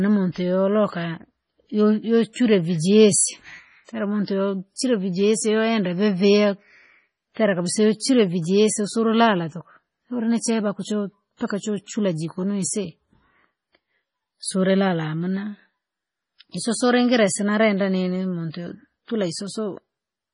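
A speech recording with heavy MP3 compression damage throughout. Nothing is heard above 10.6 kHz, where the treble stops abruptly. Weak frequency components drop in and out from frame to frame, so the sound turns watery and swirly, and s sounds carry metallic chirps. The degree of damage fits a low bitrate around 24 kbps. The likely cause is an encoder starved of bits, discarding detail its hearing model judges least important. There is also one pre-echo, from 4.76 to 4.79 s, just before "vijesi wende vivia". A short hiss of about 29 ms arrives ahead of the onset, and the attack itself sounds softened. The codec spread its quantisation noise across the whole block, so noise meant to hide under the loud onset leaked into the quiet gap before it.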